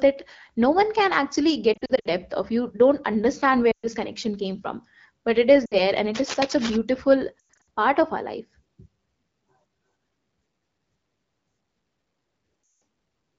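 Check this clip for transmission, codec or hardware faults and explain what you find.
Two kinds of fault are audible: repeated lost AMR speech frames, and one burst of what is likely cable scratch noise. The wideband AMR coding at 12.65 kbit/s is heard in the noise-filled upper band of the speech and lightly limits it.

Lost AMR speech frames occur at 1.74 to 2.08 s, 3.71 to 3.87 s, 5.66 to 5.80 s, 7.39 to 7.62 s and 12.63 to 12.81 s. At the first, between "no one can actually" and "of you don't understand", about 180 ms of audio is lost in pieces spread over 320 ms, with the longest gap 60 ms. Around 3.7 s the loss is 120 ms. After "from but it is" it is 60 ms. Just before "part of our life" it is 200 ms spread over 280 ms, with a 100 ms run. Near the end it is 180 ms. The decoder fills each gap by repeating the last good pitch and spectral settings at falling level. The result is a smeared, warbling stretch that fades quickly and then returns slightly rough. 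This concealment, with its frozen tone rather than a hard cut to silence, separates it from a plain dropout.

Cable scratch noise runs from 6.15 to 6.77 s. It is a dense, uneven rustling about 10 dB below the speech. It likely comes from a worn cable or connector whose contact resistance jumps as it moves. Its irregular texture, which does not track the speech, distinguishes it from clipping distortion. It also lasts longer than the few isolated clicks of a single bad edit.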